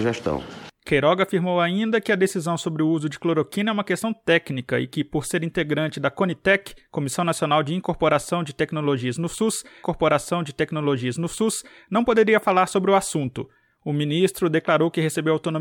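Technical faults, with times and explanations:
9.82–11.82 s, stream segment repeated: the player queued the same segment twice, so about 2.0 s of the audio plays again, with a small blip where playback jumps back to the start of the copy. A dropout leaves a gap and loses material, and a buffer stutter loops a tiny slice many times. This fault instead repeats one long, intact stretch exactly once, and the clip grows longer by that amount.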